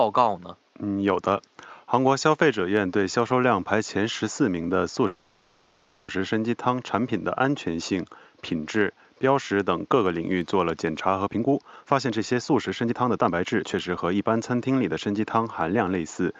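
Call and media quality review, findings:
Call audio freeze, 5.07 to 6.10 s. The last sound is stretched into a fading buzz for about 1.0 s. Nothing is lost, but everything after is pushed about 1.0 s later. Likely cause: delayed packets left the jitter buffer empty.

Jitter buffer speed-up, 11.28 to 15.37 s. Speech is hurried, running at about 124% speed with unchanged pitch. The buffer was shedding excess delay by cutting many short pitch-period slices, roughly a second in total. The codec path's top end stops near 12 kHz, which suggests Opus.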